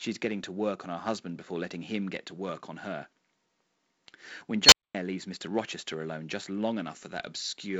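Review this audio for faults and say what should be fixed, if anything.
At 4.64 s an unstable filter blows up: a tone around 4 kHz swells over 83 ms into a loud squeal, clips, overflows, then drops out for 226 ms until the filter resets. To prevent it, check the recursive filter's coefficients for stability before running them.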